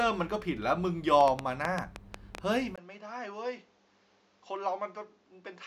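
From 1.21 to 2.39 s a train of clicks ticks over the speech, about ten sharp pops at an irregular 6.8 per second, peaking roughly 15 dB above the signal. The likely cause is electrical interference. A waveform shows isolated tall spikes, and a spectrogram shows thin vertical broadband lines.

At 2.76 s there is a 20 ms silence, and from there to the end the input switched to a poorer device, likely a different or headset microphone. The sound turns duller and drops about 10 dB, with nothing above 7.6 kHz and a new noise floor roughly 35 dB below the speech. A spectrogram shows a brief gap, then a flat ceiling at 7.6 kHz. The waveform is visibly smaller.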